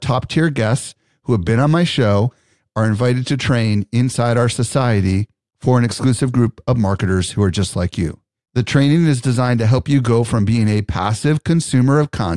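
No technical faults are audible.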